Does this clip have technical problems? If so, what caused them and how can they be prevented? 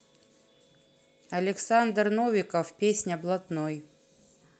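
No, nothing here needs fixing; it's speech that has come through a call connection, with the top end stopping around 8 kHz as you'd expect from an Opus-style call codec, and that's just how the call path normally sounds.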